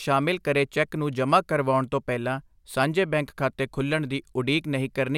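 A short speech recording, and there's nothing technically wrong to point to anywhere in it.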